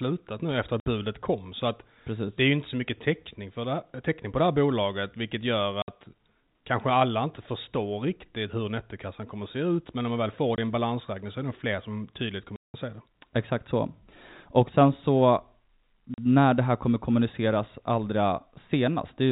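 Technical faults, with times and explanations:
0.80, 5.82, 10.56, 12.56 and 16.14 s: packet loss filled with silence. The receiver played silence for lost packets, leaving gaps of 60, 60, 20, 180 and 40 ms. These multiples fit 20 ms packets, and the gaps have hard edges. The longest gap comes right after "fler som tydligt kommer".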